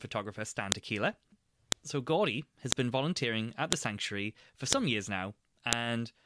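A sharp, loud click lands at 0.72, 1.72, 2.72, 3.73, 4.73 and 5.73 s. That is one snap each second. This is a file header played as audio. The sound was joined from one-second WAV pieces, and each piece kept its header. Those few dozen bytes of file information were read as sample values. Each burst is a brief, hard snap. It ignores whatever the sound is doing at that moment.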